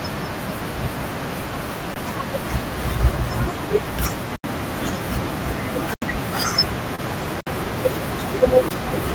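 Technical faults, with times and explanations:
1.94–1.96, 4.36–4.44, 5.94–6.02, 7.41–7.47 and 8.69–8.71 s: block of digital silence, 20 to 80 ms of silence with hard edges, heard as ticks or brief dropouts.
6.95–7.00 s: short concealed packet loss, about 20 ms missing and bridged over 26 ms by extrapolated audio, giving a brief smeared blip before blending back.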